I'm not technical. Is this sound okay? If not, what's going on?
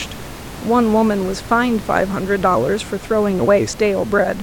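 Yes, nothing is wrong with this recording.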